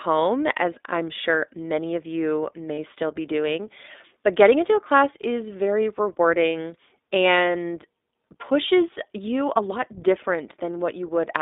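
iLBC codec damage runs throughout: the speech is confined to roughly 250 Hz to 3.7 kHz, and the rough, synthetic texture fits iLBC's 15.2 kbps mode with 20 ms frames. Lost iLBC frames occur from 2.74 to 2.79 s, between "sure many of you" and "still be doing". The decoder repeats the last pitch cycle with added noise for 40 ms, which fits two missing frames, leaving a brief buzzy held vowel before the speech recovers at once.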